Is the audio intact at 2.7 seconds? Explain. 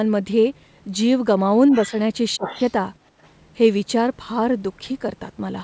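No, a faint second voice leaks in from 2.44 to 2.72 s, about 15 dB under the speech: the other side's voice leaking through, likely the echo canceller missing loudspeaker sound.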